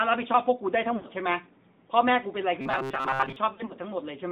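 The whole thing runs through the AMR narrowband mobile codec: band-limited to roughly 150 Hz to 3.7 kHz, plainly buzzy and synthetic, which fits the 10.2 kbps mode.

From 0.96 to 1.07 s you get lost AMR speech frames, about 80 ms concealed by stretching the last good frame, so the sound smears and dips.

Between 2.61 and 3.36 s it turns into a rigid metallic buzz at 133 Hz, likely from repeated short buffers of about 7.5 ms covering most of that stretch.

More lost frames come at 3.54 to 3.73 s, about 80 ms scattered in runs of up to 40 ms, giving quick warbly dropouts.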